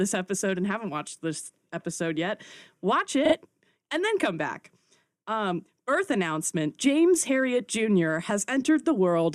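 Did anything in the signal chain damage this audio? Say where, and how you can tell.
Yes, repeated frames at 3.25 to 3.34 s, just before "and then come back", damaged the audio at the codec or storage stage. The speech stutters as about 40 ms of sound plays again, consistent with two compressed frames being written or sent twice and decoded each time. The repeats add 80 ms, so everything after that point arrives slightly late.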